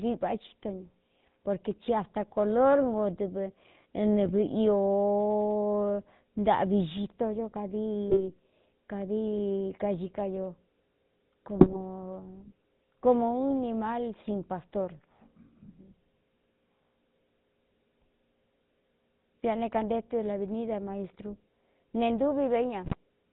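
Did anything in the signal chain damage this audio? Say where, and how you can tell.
Yes. The codec stage shows throughout: the audio has the buzzy, gravelly roughness of the GSM full-rate codec, consistent with 13 kbps coding. On a spectrogram the energy stops at a hard ceiling at 4 kHz, with nothing above it. The harmonics look coarse and smeared. The decoder rebuilds sound from a vocal-tract filter driven by a regular pulse train that keeps only every third excitation sample, so fine detail is replaced by that characteristic rasp.

GSM bit errors from the network link appear as four brief bursts at 4.24–4.32 s, 8.10–8.21 s, 11.60–11.77 s and 22.85–22.95 s. Each one breaks into squawks, pops and gargling. In the waveform, the amplitude suddenly jumps or collapses. On a spectrogram, the bursts are short vertical smears where the spectral shape bends abruptly. Corrupted filter, pitch and gain values distort each affected frame. 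The lengths point to a few 20 ms frames per burst, about twice that at 11.6 s.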